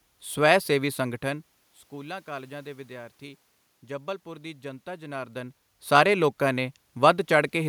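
No technical faults can be heard in this speech clip; the room noise and the level shifts near 1 second and 5 seconds, where the talker moves relative to the microphone, belong to the recording itself.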